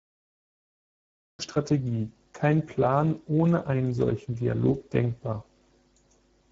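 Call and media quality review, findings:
Cut-off start at 1.39 s: digital silence from 0.0 s, then speech enters mid-sound with no attack or fade. Waveform shows a flat zero line, then the signal at once; spectrogram shows a blank region, then a hard vertical edge. Probable component: capture or stream start, where recording began late and joined an utterance already in progress.

Speex codec, throughout: plainly audible hoarse, noisy texture on the speech. Spectrogram shows nothing above 7.7 kHz, and the upper band looks smeared and noise-like rather than harmonic. Probable component: Speex CELP encoding at a low-to-middle setting, which fits a bitrate near 10 kbps. Too few bits for the excitation, with the high band synthesised as shaped noise.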